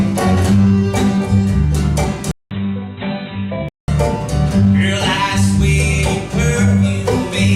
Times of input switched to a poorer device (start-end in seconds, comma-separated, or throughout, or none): 2.31-3.88